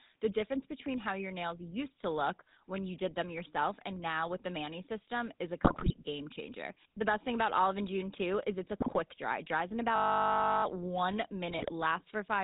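GSM full-rate codec coding runs through the whole speech clip, with plainly audible damage. The codec models the vocal tract as a filter and excites it with a sparse, regularly spaced pulse train, discarding two of every three excitation samples, and it passes nothing above 4 kHz. The result is a dull, band-limited sound with a buzzy, gravelly roughness on every voiced stretch, which fits the 13 kbps full-rate codec.

GSM bit errors first strike from 5.64 to 5.96 s, between "system is a" and "game changer", at a bit error rate of about 6.6 percent. Corrupted bits reach the decoder, so the filter, pitch and gain parameters it rebuilds from are wrong for the frames involved. The spectrum warps and the level jumps, and the speech breaks into squawks, pops and gargling. A shorter burst follows from 8.80 to 8.97 s, just after "too is it's a", at about 3.9 percent.

A system hang loop runs from 9.96 to 10.64 s, right after "dries in". 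The computer or driver stalled while the audio hardware kept cycling its ring buffer, replaying one 20 ms slice 34 times. Repeating at 50 Hz, it is heard as a steady mechanical buzz rather than a stutter, with little or no audio lost once playback resumes.

GSM bit errors return from 11.51 to 11.73 s at about 1.9 percent, the mildest burst, bringing brief garbled, gargling distortion.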